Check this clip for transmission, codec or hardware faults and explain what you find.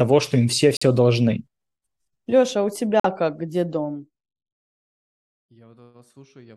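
Two kinds of fault are present in the speech: three corrupt frame muted dropouts and one stretch of zipper noise.

Corrupt frame muted: at 0.77–0.83 s, right after "что им все"; at 3.00–3.05 s, between "а у" and "как где"; and at 5.46–5.51 s. Damaged compressed frames were rejected by the decoder, and the player filled each gap with silence. The holes are roughly 47 to 64 ms long, which fits about two frames each. They start abruptly, and the timing around them stays intact. That sets them apart from a buffer underrun, where playback stalls and the following sound arrives late.

Zipper noise: from 3.76 to 4.77 s, just after "как где", the level falls by about 25 dB. The fall happens in coarse steps, around 300 a second, with no smoothing between them. Each jump puts a small discontinuity into the waveform, so a ticking or zipping rides on the sound only while the level is moving. Unlike crackle from a bad connection or random clicks, the ticks follow the fade itself and stop once the level settles.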